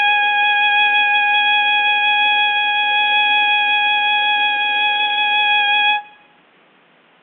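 No technical faults are audible anywhere in this music.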